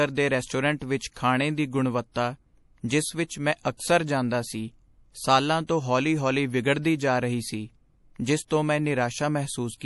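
Throughout the speech, the audio carries plainly audible damage, likely from MP3 compression at a low bitrate, which fits something near 48 kbps. Nothing survives above about 11.5 kHz, so the top end stops abruptly, and on a spectrogram that shows as a flat ceiling. With too few bits, quiet frequency lines drop in and out between frames. That gives a watery, swirling quality, seen as flickering holes in the upper bands.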